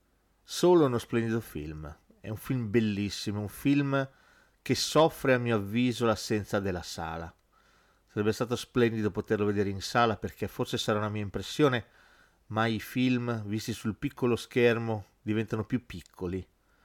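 At 4.98 to 5.05 s, hard clipping: peaks driven about 3 dB past the stage's limit are cut flat, producing a brief crackle on the speech.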